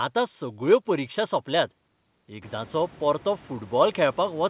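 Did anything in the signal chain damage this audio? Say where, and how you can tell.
No, nothing in the signal chain damaged this audio. The room noise rises by about 23 dB around 2.5 s but stays about 28 dB below the speech, and nothing reaches above 4 kHz, which fits an ordinary G.711 mu-law call path.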